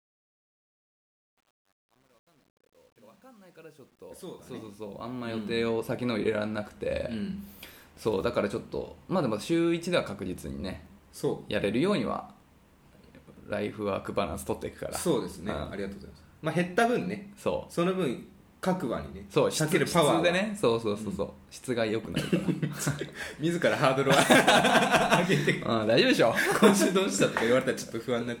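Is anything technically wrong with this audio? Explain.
Yes. From 0.0 to 5.69 s, the fade-in at the start carries truncation distortion, worst from 0.0 to 4.75 s. The fade was applied without dither at too coarse a resolution, consistent with about 10 bits. At the lowest gain steps, the waveform collapses into a few square levels. The opening sounds gritty, cleaning up as the level rises. Unlike steady hiss or gate chatter, the grit follows the signal itself and disappears once the fade is loud enough.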